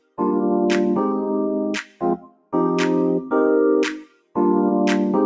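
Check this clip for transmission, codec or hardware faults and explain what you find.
There are two related faults, both from a speech noise suppressor, heard through call microphone processing that carries nothing above 8 kHz.

Noise suppressor applied to music or sounds: throughout the clip, the level pumps and thins, with sustained parts and tails sinking while attacks mostly survive. A speech-oriented suppressor is treating steady content and ambience as noise, swinging its attenuation by roughly 20 dB.

Sound cut by the noise suppressor: from 0.0 to 0.21 s, 1.82 to 2.54 s and 3.99 to 4.37 s, the sound drops away noticeably, by about 19, 20 and 19 dB at its deepest. In these stretches the suppressor classified the audio as noise and pulled it down harder than the rest.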